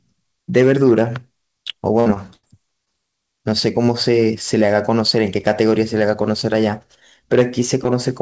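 At 2.00 to 2.08 s there is a burst of packet loss. About 60 ms of speech never arrived. The receiver stretched the last sound over the gap and faded it down. It is heard as a brief held sound that fades away. Speech then picks up slightly further along, with that stretch gone.

At 2.14 to 2.18 s comes a short concealed packet loss. About 20 ms went missing. The decoder patched it by continuing the previous sound and blending back in. It is heard as a quick smear.

A second burst of packet loss runs from 2.34 to 2.45 s. This time about 100 ms dropped out. The filled stretch is longer, so the held, fading sound lasts longer.

A final short concealed packet loss sits at 2.85 to 2.88 s. Roughly 20 ms is missing. It leaves a small smear or wobble. Throughout, the call audio stops at 8 kHz, which fits G.722 at 64 kbps.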